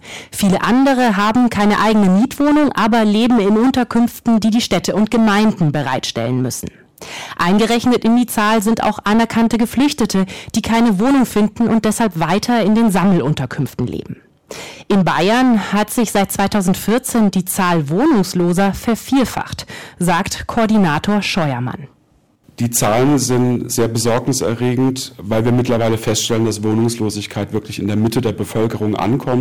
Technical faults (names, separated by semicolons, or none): hard clipping